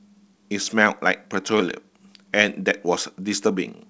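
No technical faults are audible.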